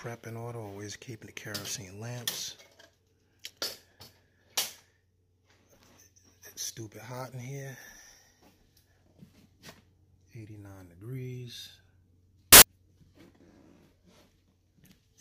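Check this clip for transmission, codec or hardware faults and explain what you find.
One fault stands out: file tags played as audio, from 12.53 to 12.62 s. For about 0.09 s the playback reads a block of embedded compressed data, a cover picture, as though it were samples. Because compressed bytes are close to random, the result is very loud white noise with abrupt, hard edges. Unlike a codec dropout or packet-loss burst, which tends to be quieter, smeared or shaped by concealment, this static is flat-spectrum, very loud and cleanly gated.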